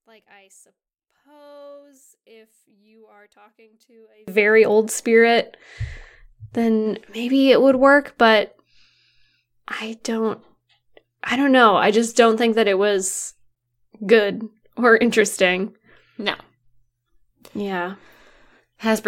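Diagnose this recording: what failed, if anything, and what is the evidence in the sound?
From 0.0 to 4.28 s the speech nearly vanishes, about 36 dB down, leaving a faint residue. The likely cause is one channel inverted in the analogue wiring, so the centred speech cancels when summed to mono. The waveform collapses to a sliver, and the spectrogram goes almost blank.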